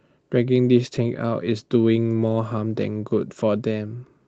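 Speech, carried over a call path whose sound is capped near 8 kHz, which points to Opus. From 0.95 to 0.97 s there is a lost packet rebuilt from error correction. The sound briefly turns rougher and noisier. No gap is heard. That fits one 20 ms packet replaced by the low-bitrate copy carried in the next one.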